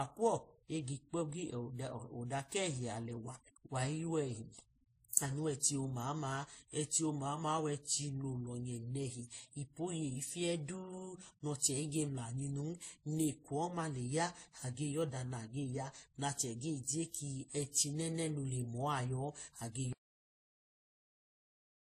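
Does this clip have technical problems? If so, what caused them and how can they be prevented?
Yes. Throughout, transcoding between lossy codecs is likely: low-rate MP3-style smearing compounded by WMA artefacts, with nothing above 15.3 kHz, a flat ceiling on a spectrogram. Encode once, from the original source.

Cut-off end at 19.93 s: the audio halts mid-sound into digital silence, a flat waveform line with no decay. Flush and write all final buffers before closing.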